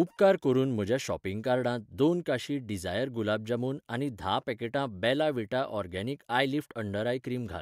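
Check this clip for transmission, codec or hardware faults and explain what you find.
One fault runs through the whole speech clip: the resampler restarted on every block. Across the full length, each 100 ms block was converted separately, which fits a change from 48 kHz to 44.1 kHz. At every block boundary the converter lacked the true neighbouring samples, so each edge carries a small discontinuity. The result is a steady ticking at 10 Hz, audible beneath the speech and absent in the pauses.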